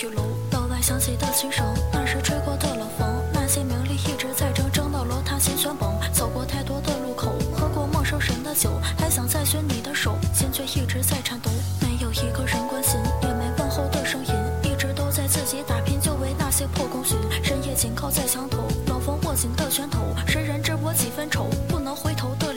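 Low bit depth without dither runs from start to finish. Quiet passages turn gritty and grainy, and the faintest moments sputter or fall to silence, while the distortion tracks the sound itself. This likely comes from truncating the samples to very few levels, which fits roughly 6 bits, with no dither to break up the rounding error. That leaves an error floor only about 25 dB below the signal.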